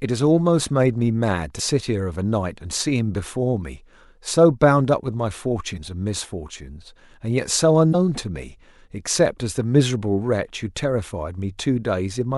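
Three short bursts of damaged data in the compressed stream break into the speech at 1.56 to 1.60 s, 5.74 to 5.78 s and 7.91 to 7.95 s, each about 40 ms long. Corrupted bytes made the decoder misread those frames and lose sync until it found a valid header again, so each event comes out as a brief disturbance, a chirp, squawk, click or short hole.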